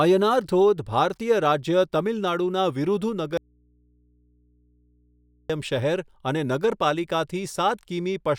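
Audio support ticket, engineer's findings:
Audio dropout to a faint residue, 3.37 to 5.50 s. Speech cuts out hard for about 2.1 s and comes straight back. The gap holds just faint mains hum, way below speech level. Likely a signal break upstream, with the input left open and picking up hum.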